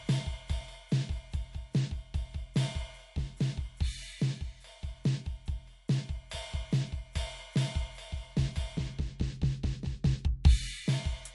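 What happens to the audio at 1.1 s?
At 1.1 s, like the whole clip, the music has plainly audible damage that's likely MP3 compression, probably around 50 kbps: nothing above 11.3 kHz, and a watery, swirly smear from starved frequency lines.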